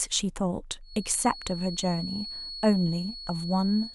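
From 0.8 s to the end of the speech, a thin, steady whistle near 4.4 kHz sits behind everything, roughly 15 dB below the main signal and swelling and fading slowly in level. This is a feedback whistle: the likely cause is sound from a loudspeaker reaching the microphone and looping back at just enough gain to sustain that one frequency without running away into a howl, so it hangs on as a persistent tone.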